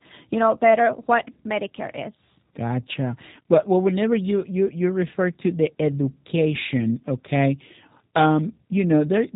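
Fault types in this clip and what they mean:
G.729 codec: the speech runs through a low-rate VoIP coder that rebuilds each 10 ms frame from a vocal-tract model, pitch prediction and a few pulses, consistent with 8 kbit/s. Nothing survives above 3.8 kHz, and it sounds plainly rough and synthetic throughout.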